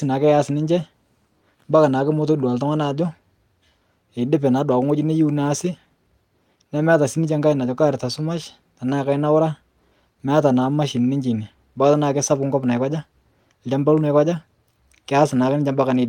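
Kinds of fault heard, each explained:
No kinds of fault are heard.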